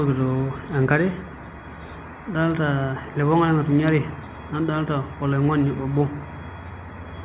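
No faults can be heard in this speech clip. It passed through a call path, and nothing reaches above 4 kHz, which points to a narrowband telephone codec such as G.711 mu-law.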